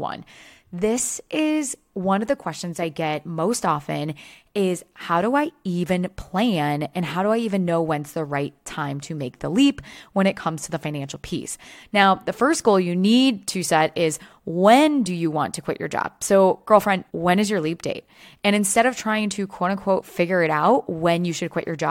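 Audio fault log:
No technical faults can be heard anywhere in this speech recording.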